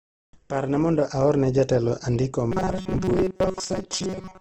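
This speech clip sounds rough and grainy throughout, with a muffled top and nothing above about 8 kHz. That is likely Opus compression in its music mode at a low bitrate, possibly around 16 kbps, filling starved bands with noise and folded copies. From 2.52 to 4.41 s the speech turns into a rigid, metallic buzz at 188 Hz, loosely tracking the syllables. This is robotic sound from repeated short buffers, likely a playback loop re-sending its last chunk, which fits a buffer of about 5 ms, while most of the real audio in that stretch is skipped.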